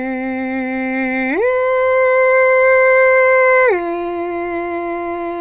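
No technical faults are audible anywhere in the music.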